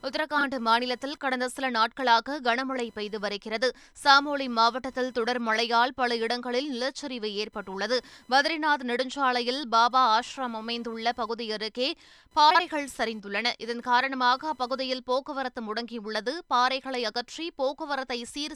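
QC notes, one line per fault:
Throughout: computer activity noise. A faint buzz with a pulse rate of around 1 kHz sits about 40 dB below the speech. Processor, graphics or mouse load is disturbing the shared audio ground, so the buzz follows the computer's activity, not the speech.
0.38–0.44 s and 12.50–12.60 s: frames out of order. Two neighbouring runs of audio play swapped, each about 24 ms in the first case and 48 ms in the second, which fits one and two frames per run. Each sounds like a brief garbled flutter. No time is lost.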